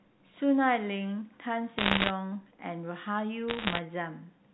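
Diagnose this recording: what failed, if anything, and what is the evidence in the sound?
Crackling ticks over intact speech at 1.78–2.10 s and 3.48–3.79 s indicate bit errors on the digital phone line, each flipped bit corrupting one sample.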